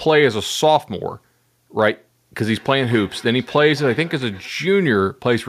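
From 2.57 to 4.58 s, feedback echo between two devices: a nearby device replays the call, and this microphone picks it up beyond its own echo canceller's reach. A thinner, ringing copy trails by roughly a fifth of a second, about 22 dB below the speech.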